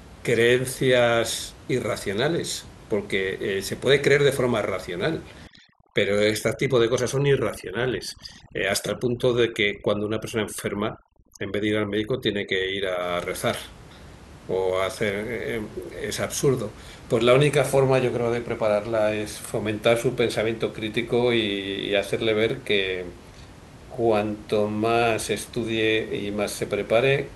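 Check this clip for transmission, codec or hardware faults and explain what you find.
Overdone noise removal affects 5.47 to 13.02 s. Bands near the noise estimate are cut too hard. The background twinkles, and quiet parts of the speech are cut along with it.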